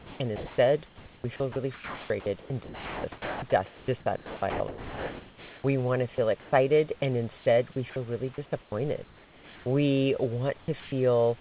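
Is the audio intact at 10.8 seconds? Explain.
No. From 10.6 to 10.92 s the real room background drops out and a steady, featureless hiss takes its place. This is likely comfort noise in place of the background: the sender's voice detector paused transmission, and the receiver filled the gap with synthetic noise.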